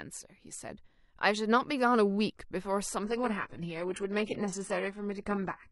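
At 3.03 s the speech switches abruptly, with no gap, to a much lower-quality version and stays there until the end at 5.72 s. This is an adaptive stream at a lower bitrate: the player dropped to a cheaper encoding when throughput fell. The upper range turns thin and synthetic with added codec artefacts, which fits a shift from a conventional AAC stream at moderate bitrate to a very low-rate HE-AAC variant.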